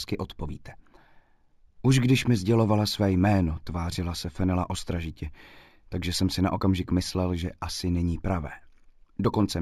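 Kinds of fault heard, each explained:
Imaging from linear upsampling: throughout, the sound was converted from 16 kHz to 48 kHz by joining neighbouring samples with straight lines, a crude interpolation that filters poorly. The top of the original band just below 8 kHz is dulled, and a mirrored copy of the spectrum folds up into the 8 kHz to 16 kHz region, roughly 25 dB down. That leftover image adds a faint metallic shimmer to sibilant and bright high-frequency content.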